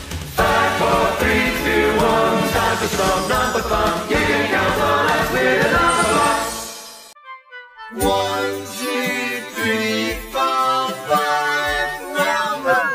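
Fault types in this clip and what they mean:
Nothing stood out on listening to this clip.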